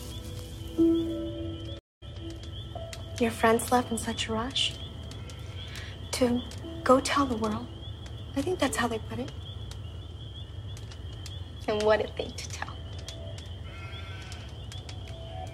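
A stream reconnect breaks the audio at 1.79 s, where the sound cuts to silence for 227 ms and resumes at 2.03 s from a later point, skipping roughly 150 ms of material. The connection dropped, the player reconnected, and a fresh decoder picked the stream up mid-flow. On a waveform this is a flat gap with an abrupt cut going in and a fade-in coming out; a spectrogram shows a blank vertical band and a discontinuity where the content jumps ahead.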